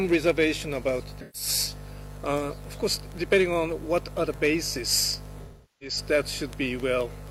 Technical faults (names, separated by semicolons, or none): AAC frame loss with concealment